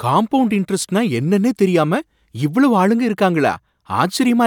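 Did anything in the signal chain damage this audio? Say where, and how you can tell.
No, nothing in the chain has left an audible mark on this speech at any stage.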